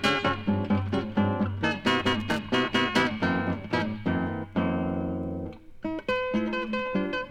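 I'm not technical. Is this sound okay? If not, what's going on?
No. From about 2.20 to 2.39 seconds there is a short burst of loose connector crackle: a worn or dirty plug contact flickering on and off. Unlike a single digital click, it sounds ragged and scratchy, a cluster of uneven pops.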